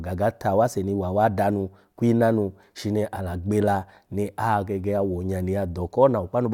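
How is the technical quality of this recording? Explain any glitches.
Listening closely, nothing in the recording stood out as a technical problem, so there are no glitches to explain.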